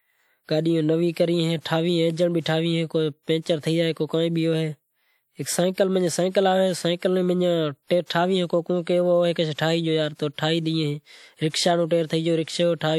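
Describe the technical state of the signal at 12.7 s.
At 12.7 s, as throughout, there is transcoding between lossy codecs. Two distinct artefact textures are stacked rather than one, likely from an MP3 pass re-encoded as WMA, with nothing above 20.1 kHz.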